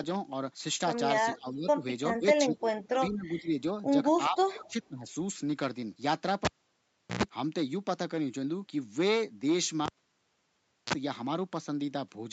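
From 1.37 to 1.84 s, 2.12 to 2.25 s, 2.46 to 3.54 s and 4.29 to 5.07 s, the speech sinks in level, by about 15 to 25 dB at its deepest. This is most likely speech suppressed in double talk. Both ends spoke at once. The echo canceller could not tell the talker from the returning echo, so it turned everything down. The last dip is the deepest.

At 6.45 s a cable is pulled and plugged in. A pop cuts the sound. Near silence follows for about 0.73 s. Then a short 60 Hz mains buzz lasts about 110 ms while the plug's tip alone makes contact. A second pop brings the audio back at 7.23 s. The same happens from 9.86 to 10.93 s, with about 1.03 s of silence and a briefer buzz of about 35 ms.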